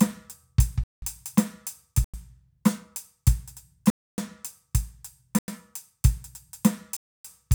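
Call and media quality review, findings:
Blocks of digital silence in the music at 0.84–1.02 s, 2.04–2.14 s, 3.90–4.18 s, 5.39–5.48 s and 6.97–7.25 s (93–279 ms), cutting out and back with no fade; lengths fit whole 4096-sample buffers at 44.1 kHz, pointing to output buffer underruns.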